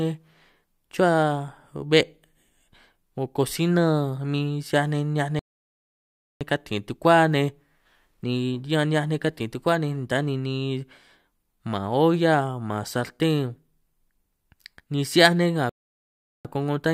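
At 5.39 s the speech stops dead for about 1.0 s, resuming at 6.41 s; at 15.69 s it halts again after "'hiaj nej nga" for about 0.75 s, continuing with "ko'ngo ta" at 16.45 s. Both are playback stalls, likely the player starving for data before recovering. Unlike a brief dropout or packet-loss gap, these silences last most of a second.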